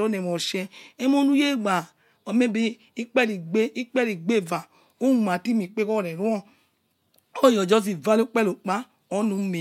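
Listening closely to the speech recording, nothing stood out as a technical problem at any point.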